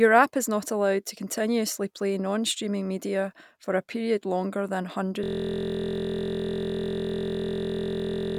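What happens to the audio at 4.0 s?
Nothing goes wrong at 4.0 s; the speech there carries on intact, with no dropout, click, glitch or distortion at that moment.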